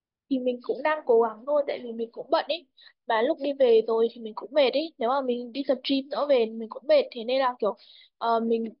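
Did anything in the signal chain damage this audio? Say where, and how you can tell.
No, nothing in the signal chain damaged this audio.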